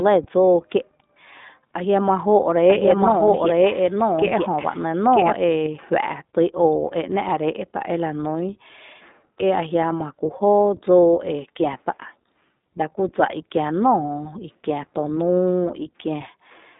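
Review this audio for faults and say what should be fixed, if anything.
The whole clip carries iLBC codec damage. Speech sits in a 200 Hz to 3.7 kHz band, nothing above 3.8 kHz. Independent 20 ms frames sound rough and synthetic, fitting the 15.2 kbps mode. Record through a wideband path instead.

From 2.68 to 5.32 s there is a doubled audio track. A second full-band copy trails about one second behind at roughly equal level. It starts and stops abruptly, with no room colour. A duplicate capture path is the likely cause. Mute the second path so only one copy reaches the mix.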